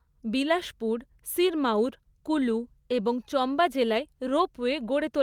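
Nothing in the speech recording points to a technical fault: the signal holds steady throughout, with no dropouts, distortion, level jumps or other audible disturbances.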